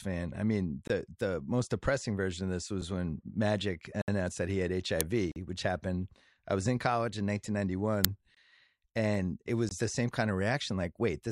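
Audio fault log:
0.88–0.90 s, 2.81 s, 4.02–4.08 s, 5.32–5.36 s, 8.35–8.37 s, 9.69–9.71 s: block of digital silence. Audio drops to silence between "I mean" and "the the most depressing", before "which happened I was", and between "and it" and "the same kind of". Output buffers went unfilled, which fits 1024- and 2048-sample buffers. The sound cuts out and back abruptly, and the gaps from 4 to 64 ms sound like ticks or short holes.
5.01 s, 8.05 s: uninitialised buffer. Blocks of stale memory, 0.67 and 2.67 ms long, were played as audio. Each one is heard as a loud crack.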